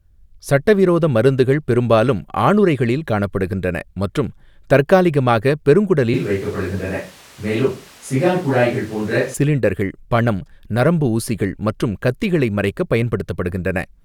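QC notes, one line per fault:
6.14–9.34 s, switch to a distant microphone: the close mic's feed likely dropped out, leaving a far-off pickup. The speech turns abruptly roomy and hollow, thinner in the bass, roughly 5 dB quieter, with room noise rising to around 25 dB below the speech, then snaps back.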